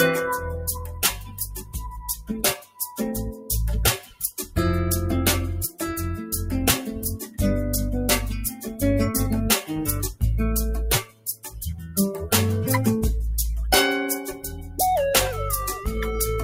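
A noise suppressor built for speech runs across the whole clip and treats steady or decaying parts of the sound as noise, so the level keeps swinging by around 10 dB as it grabs and releases. Onsets get through while sustained parts and tails are pulled down, which produces a pumping, thinning character. On a waveform the envelope shows this as an uneven breathing of amplitude. On a spectrogram, sustained energy and decays fade early while onsets stay bright.

The sound cut by the noise suppressor is clearest in six stretches. From 0.38 to 3.49 s, for about 3 s of that span, the level drops by up to about 18 dB. From 4.01 to 4.57 s it drops by up to about 17 dB, from 7.21 to 7.40 s by about 10 dB, and from 8.51 to 8.82 s by about 6 dB. From 11.02 to 12.27 s it falls by up to about 18 dB, and from 14.32 to 14.79 s by about 9 dB. In each, the held or fading sound sinks or ends abruptly. These appear as hollowed-out notches in the waveform and as darkened, truncated regions on the spectrogram.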